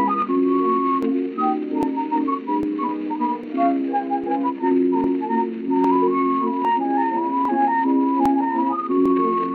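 A regular click or pop recurs every 0.80 s from 0.22 to 9.06 s, likely clock drift buffer slips: a clock mismatch near 1000 ppm drops or repeats a few dozen samples each time.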